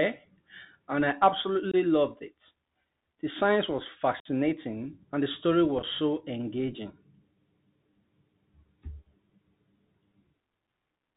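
The speech runs through a Bluetooth CVSD headset codec throughout, with nothing above 4 kHz on a spectrogram, a granular hiss floor, and scratchy, overdriven sibilants.

Unconcealed Bluetooth headset packet loss leaves abrupt holes at 1.71–1.75 s, 4.20–4.27 s, and scattered short gaps across 5.79–5.84 s, each showing as a flat waveform gap or blank spectrogram columns.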